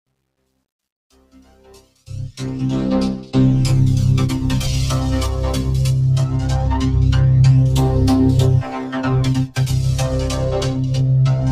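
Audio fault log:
0.00–2.91 s, truncation distortion on a fade: the fade-in rises smoothly from the start, but its quiet opening is gritty, worst from 0.00 to 1.34 s. The gain stage keeps too few bits and adds no dither, which fits roughly 11-bit resolution, so low-level waveform collapses into coarse square steps. The waveform shows staircase shapes, and the spectrogram shows broadband hash that fades as the level rises.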